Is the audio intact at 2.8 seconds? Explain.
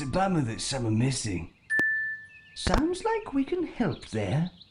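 No. At 2.8 seconds the audio is disturbed by a loud pop, a pair of sharp pops spanning 2.67 to 2.80 s and peaking about 20 dB above the surrounding signal. This is likely a sudden voltage step or pulse entering the chain, such as a plug, switch or static discharge. The downstream circuitry shapes each pulse into a brief thump, while the underlying sound continues beneath it.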